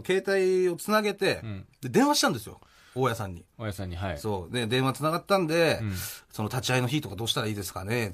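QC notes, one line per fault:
No faults were heard on this speech recording.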